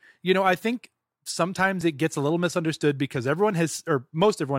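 A speech clip with a single overlap between stream segments, at 1.81 s, just before "it gets a little". It sounds like a tiny skip in the speech. About 14 ms of real audio is missing. Two adjacent segments claimed the same stretch of time, and the player discarded that stretch as a duplicate. The waveform jumps across the gap. The segments here appear to be about 4 s long.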